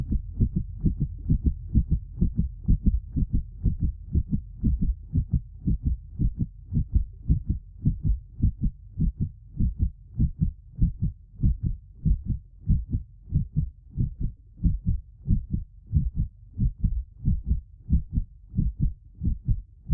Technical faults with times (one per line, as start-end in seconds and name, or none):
none